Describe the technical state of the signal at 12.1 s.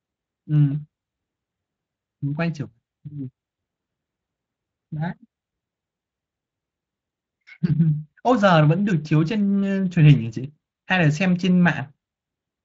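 At 12.1 s the speech is intact, with no fault at that moment, only the light, steady coloration of the Speex coding that runs throughout.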